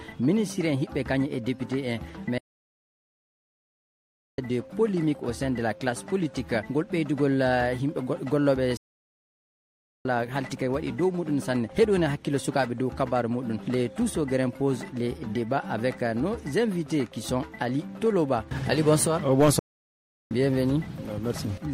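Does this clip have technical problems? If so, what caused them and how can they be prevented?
Yes: three playback stalls, where the sound halts into clean silence at 2.38–4.38 s (2.0 s), 8.77–10.05 s (1.28 s) and 19.59–20.31 s (0.72 s), likely because the player starved of data or its thread blocked. Unlike brief clicky dropouts, these are long, abrupt silences. Larger playback buffers and a non-blocking audio thread prevent them.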